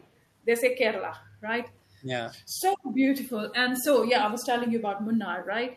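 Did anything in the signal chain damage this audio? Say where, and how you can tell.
Yes, call processing: a faint echo leak at 0.00–0.09 s, a copy trailing about 425 ms behind, likely residual loudspeaker pickup, unlike reverb's smooth decay.

Speech suppressed in double talk at 1.99–2.12 s: the level drops by roughly 20 dB, likely echo-canceller gating during overlap, unlike a network dropout's abrupt silence.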